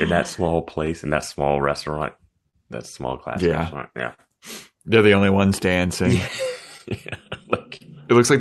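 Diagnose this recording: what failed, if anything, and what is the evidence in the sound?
Clock drift between sender and receiver, at the network and buffer stage: the sending clock runs roughly 3% slow, so the jitter buffer keeps draining. Unlike random network jitter, the resulting hiccups all lean one way, stretching rather than skipping, across the whole clip.

Repeated timing corrections, in the receiver's buffer: from 0.14 to 6.44 s the sound plays at about 99% speed, adding around a tenth of a second overall. Small stretches are spliced in to keep pace, heard as a faintly unsteady tempo rather than distinct dropouts.

Short stall from a late packet, on the network side: at 2.49 to 2.55 s and 4.14 to 4.20 s the buffer ran empty and the last sound was held for 43 and 45 ms. Nothing is lost; the sound resumes where it paused, unlike a gap that skips content.

Scattered short gaps, network loss or lateness: between 6.78 and 7.83 s about four small holes, the longest around 40 ms, are patched by continuing the preceding sound. 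These give brief smears or ticks without missing audio. The Opus call path's roughly 12 kHz top end is heard throughout.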